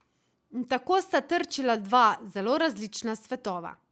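No technical faults can be heard in this speech. It has passed through a call's microphone processing and an Opus call path, and nothing in the sound reaches above 8 kHz.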